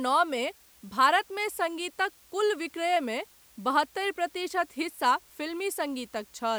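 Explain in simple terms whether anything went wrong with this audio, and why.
Something did go wrong: the recording was stored with very few levels of loudness, which fits 8-bit audio, a problem called low bit depth with dither. Rounding every moment of the speech to such a coarse scale leaves small errors, and a little random noise was mixed in first so that those errors come out as smooth hiss instead of harsh crackle. The result is a steady, even hiss running from start to finish, beneath the speech.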